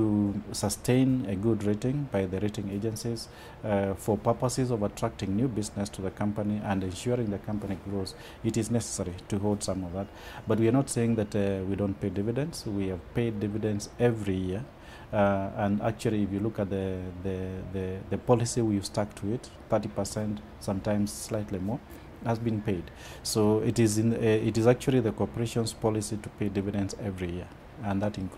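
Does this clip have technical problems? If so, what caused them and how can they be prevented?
No, nothing in the recording points to a technical fault, so there is no cause to trace and no prevention needed.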